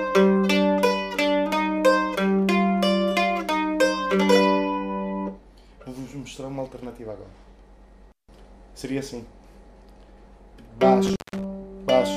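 At 11.06 to 11.44 s an intermittent contact opens the line for about 170 ms, cutting the sound with crackle at both edges and faint hiss between, unlike a clean digital dropout.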